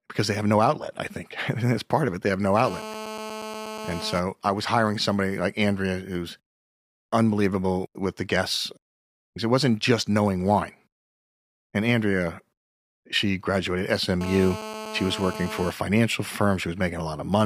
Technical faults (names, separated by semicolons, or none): GSM phone buzz